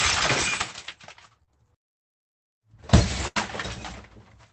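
From 1.43 to 1.50 s the sound briefly smears and wobbles. This is a short concealed packet loss: about 40 ms of audio never arrived, and the receiver patched it by extending the preceding sound.

From 3.27 to 3.39 s the last sound is held while it fades, then the audio picks up further on. This burst of packet loss left an 83 ms gap filled with continuation, and 80 ms of real audio is gone.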